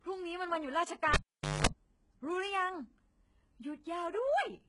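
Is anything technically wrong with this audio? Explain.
Yes. Two faults can be heard in this speech clip.

Throughout, the top end sounds synthetic and gritty, with nothing above 11 kHz. The likely cause is HE-AAC compression. That codec codes only the lower spectrum. It rebuilds the treble by copying lower bands upward under a coarse envelope. The damage here is heavy, which points to a very low bitrate, around 12 kbps. The rebuilt harmonics do not line up with the real ones. Sibilants come out metallic and lispy.

From 1.14 s to 1.67 s, a cable is pulled and plugged in. A pop marks the disconnect. Then the signal drops to near silence for about 480 ms. While only the plug tip touches, a burst of 50 Hz mains buzz lasts about 210 ms. The ungrounded contact picks up hum from the power wiring. A second pop follows as the full connection is restored and the speech returns.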